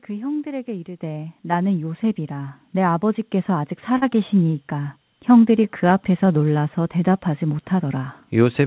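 At 1.02 s the speech and the background jump up together by about 7 dB, then rise again by about 3 dB at 2.04 s. This is a microphone volume stepped up: the call software judged the input too quiet and raised the device's gain abruptly each time.

From 3.98 to 4.04 s there is a brief smear where the sound briefly carries on unnaturally before settling back. This is short concealed packet loss: about 40 ms never arrived, and the receiver extended the preceding audio for roughly 36 ms to hide the gap.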